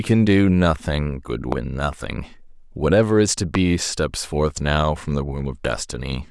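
A sudden voltage step, likely from a switch, plug contact or static discharge, twice enters the signal path, and the following circuitry shapes each step into a brief pulse. The result is two loud pops, at 1.52 s and again at 3.55 s, each lasting about 20 ms and peaking roughly 15 dB above the speech. Each is a single sharp hit sitting on top of the speech, which continues beneath it uninterrupted.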